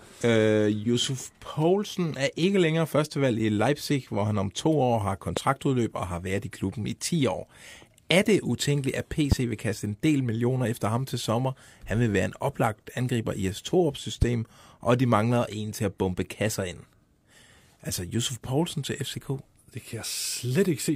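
A sharp, single loud pop cuts through the speech three times: from 5.37 to 5.40 s, from 9.32 to 9.35 s, and from 14.22 to 14.25 s. The first two jump roughly 15 dB above the surrounding speech, and the last is harsher at about 20 dB. The speech continues underneath each one. The likely cause is a brief voltage spike, such as a switch, static discharge or driver glitch, that was added to the signal and then shaped by the following circuitry.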